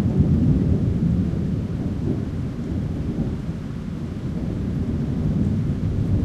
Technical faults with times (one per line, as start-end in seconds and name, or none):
none